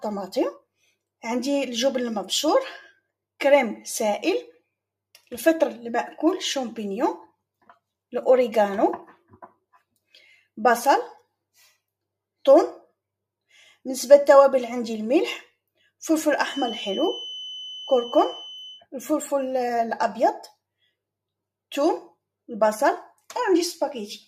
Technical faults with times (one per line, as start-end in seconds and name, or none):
16.38-18.87 feedback whistle